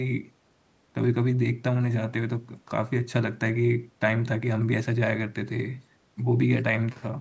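Nothing goes wrong anywhere in this speech; it has simply passed through a call's microphone processing, which trims away the deepest bass and leaves nothing above 8 kHz, and that's just how such a path normally sounds.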